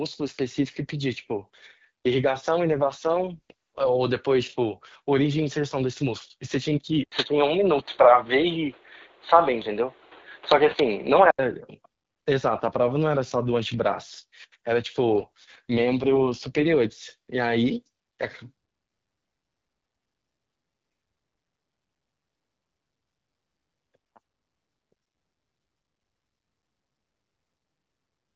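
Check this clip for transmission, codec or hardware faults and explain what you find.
Two kinds of fault are present. Both are transmission or hardware problems, heard over the AMR wideband (HD Voice) codec's light coding.

AMR rate drop, 2.64 to 3.90 s and 15.16 to 16.70 s. A weak link forces a lower rate. The band holds, but the speech turns rough and synthetic. This fits 12.65 falling to 6.6 kbit/s.

Input switched to a poorer device, 7.04 to 11.39 s. An 80 ms silence precedes it. The audio then dulls, with nothing above 4.5 kHz. The level shifts by roughly 5 dB. New noise sits about 35 dB below the speech. A microphone or headset change is the likely cause.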